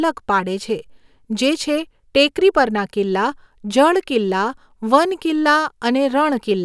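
A short speech recording with no technical fault to be heard. Nothing in it calls for a time or a cause to be given.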